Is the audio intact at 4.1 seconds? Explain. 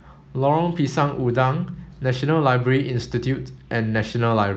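Yes, the audio is intact at 4.1 seconds: the speech there carries only the ordinary coding character of the call path, with no dropout, glitch or other fault.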